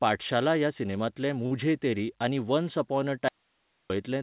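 Audio dropout to a faint residue, 3.28 to 3.90 s: the speech cuts out abruptly for about 0.62 s, leaving only hiss far below the signal, likely a break upstream while the 4 kHz-limited call path stayed live.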